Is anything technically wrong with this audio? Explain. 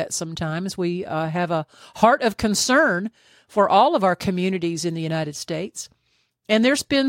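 No, nothing technically wrong can be heard in this speech recording.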